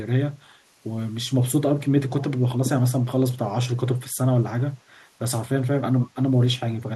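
Echo leak at 2.2 to 2.24 s and again, fainter, at 6.76 to 6.8 s: a brief, quiet copy of the speech trailing 290 ms behind, likely from a loudspeaker echo the far end's canceller missed.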